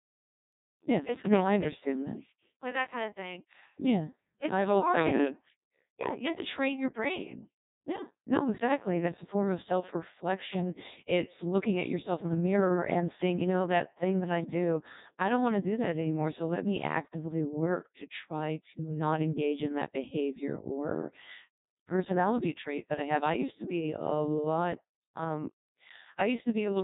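From start to finish, the speech passes through a Codec 2 vocoder. The damage is heavy. Only pitch, voicing, loudness and a rough spectral shape survive, rebuilt from sine waves. Voices sound robotic and buzzy, which fits roughly 1.2 kbit/s. Nothing remains above 3.8 kHz.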